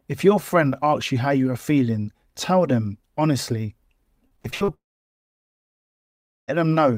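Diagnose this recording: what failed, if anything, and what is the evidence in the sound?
The network stage failed first with repeated packet loss, heard as a robotic sound from 4.27 to 4.70 s. Six short holes fall inside that span. The longest lasts about 58 ms. The receiver patched each hole by stretching the last sound it had, so roughly two fifths of the stretch is synthetic filler. The result is choppy. About 0.2 s of real audio never arrives.

The second fault is a long network dropout from 4.74 to 6.50 s. About 1.7 s of audio is gone. A brief continuation of the last sound carries on, then fades. Nearly all of the gap is silence. The sound resumes at 6.50 s, with the missing part simply skipped. Because it follows the packet loss directly, the likely cause is the link stalling completely after a period of instability.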